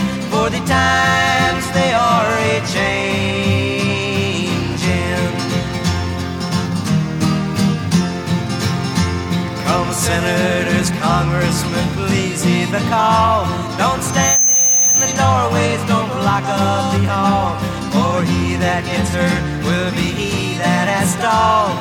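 At 14.05 s a loudspeaker feedback squeal starts. A 6.2 kHz tone swells within a fraction of a second, sitting a few dB above the sound, until 15.4 s.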